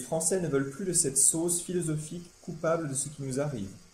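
No technical faults can be heard anywhere in this recording.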